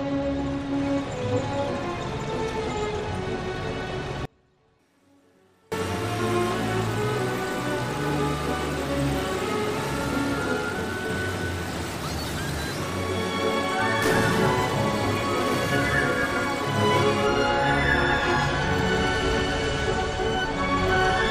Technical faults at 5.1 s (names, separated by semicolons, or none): audio dropout to a faint residue